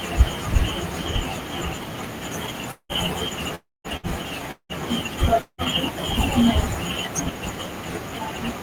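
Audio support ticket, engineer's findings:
Gaps at 2.71–2.92 s, 3.55–3.87 s, 4.51–4.72 s and 5.41–5.61 s, roughly 180 ms lost each, 300 ms in the second. Last sound drawn out as a fading buzz or hiss, then 80–220 ms of dead air before audio resumes further on. Likely a long network dropout, receiver concealment running out.

Short hiccup at 3.97–4.06 s, about 60 ms of audio gone. The receiver stretches the last sound and fades it, then playback jumps ahead with that chunk missing. Classic burst of packet loss: a few consecutive packets dropped or too late to play.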